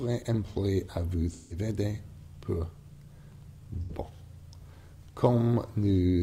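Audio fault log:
1.31–1.57 s and 3.81–3.91 s, AAC frame loss with concealment: smeared, noisy patches where the decoder rebuilt missing frames from the last good spectrum; the lengths fit four and then two lost frames.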